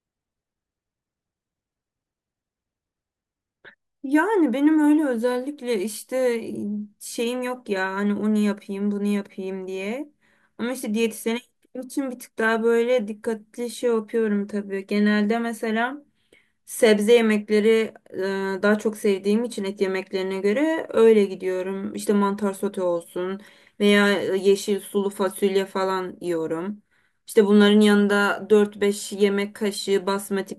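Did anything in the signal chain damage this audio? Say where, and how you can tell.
No, nothing in the chain audibly damaged this recording.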